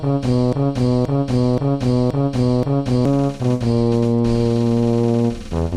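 Right from the start, already under way, a broken-record loop repeats the same 0.53 s fragment five times until 3.05 s, likely a stalled player resending its last buffer.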